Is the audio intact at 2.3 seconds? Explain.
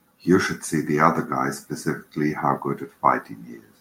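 Yes, the speech at 2.3 seconds plays through intact, with no fault at that moment.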